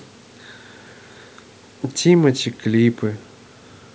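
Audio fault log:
No faults found in this speech clip.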